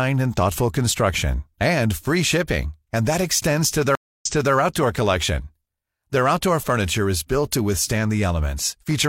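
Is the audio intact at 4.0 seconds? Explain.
No. From 3.95 to 4.54 s the speech drops out for 0.26 s, then resumes 0.33 s earlier than where it stopped, so a short stretch repeats. This is a stream reconnect: the connection broke, and a fresh decoder restarted mid-stream from resent data.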